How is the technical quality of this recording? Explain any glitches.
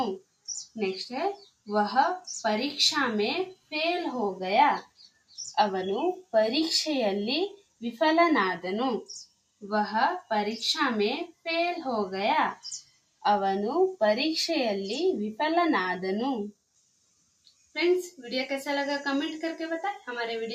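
The recording has audible processing problems: a noise suppressor designed for speech is acting on this audio, causing constant level swings and repeated deep dips.

Noise suppressor applied to music or sounds, throughout the clip: the processor mistakes steady and ambient content for background noise and turns it down. The level swings by around 20 dB. Onsets pass through while held portions and tails fade, so the audio pumps and thins.

Sound cut by the noise suppressor at 0.19–1.68 s, 3.54–3.72 s, 4.82–6.33 s, 7.56–7.82 s, 9.09–10.3 s, 11.29–11.46 s, 12.56–13.24 s and 16.52–18.19 s: in these spans the suppressor treated the sound itself as noise and pulled it down by about 21 dB, and by about 18 dB at 3.54 s. Sustained parts sink and decays are cut short.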